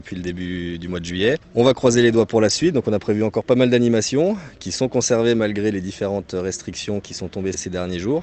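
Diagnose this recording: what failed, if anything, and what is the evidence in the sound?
Nothing failed here: the sound carries the usual coding texture and the top end that stops around 8 kHz you'd expect from an Opus call link working as designed, and no stage from capture through the network to playback shows any sign of trouble.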